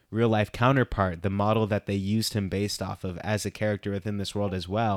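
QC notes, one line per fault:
No technical faults were detected in this speech recording.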